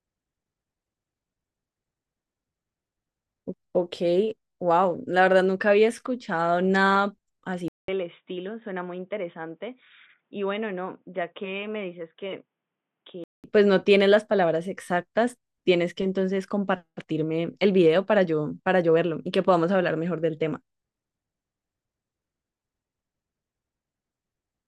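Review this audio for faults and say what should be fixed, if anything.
From 7.68 to 13.44 s the speech turns dull and boxy, with nothing above 3.8 kHz. It drops roughly 10 dB in level and carries a new background noise sitting about 50 dB below it. A 200 ms silence marks the change, which points to the input likely having switched to a poorer device. Unlike a filter or codec bandwidth drop, the level and noise floor shift too. Preventing this means locking the recording to one fixed input device.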